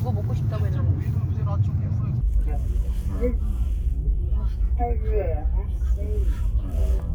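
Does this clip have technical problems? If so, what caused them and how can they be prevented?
Yes. From 2.21 s to the end of the clip, the audio shows the fault known as stereo read as mono. The interleaved left and right samples are being consumed in sequence as one channel, so each stereo frame becomes two mono samples. The sound slows to half speed and drops 12 semitones, a full octave, and a weaker mirrored copy of the content shows up in the upper half of the spectrum. Prevention: read the channel count from the file header and de-interleave accordingly before playback or processing.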